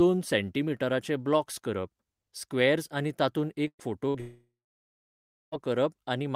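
Bursts of packet loss at 3.67–3.82 s and 4.09–4.17 s drop about 120 ms and 60 ms of speech. The receiver stretches the last sound into a fading buzz or hiss before speech jumps ahead. From 4.20 to 5.55 s, a long network dropout is the likely cause: the last sound fades, about a second of silence follows, and roughly 1.3 s of speech is lost.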